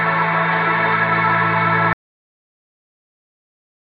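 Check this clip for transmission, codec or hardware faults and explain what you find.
One fault is present. At 1.93 s the audio suffers a dropout to silence that lasts to the end of the clip: the sound stops abruptly mid-flow and is replaced by silence with no room tone. The likely cause is a lost input, such as a disconnected device, a failed link or an accidental mute, while the recorder kept writing empty samples.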